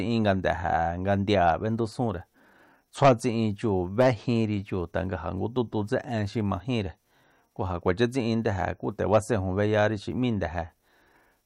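No technical faults turn up anywhere in the recording. The speech runs without any break, glitch or disturbance at any point along the way.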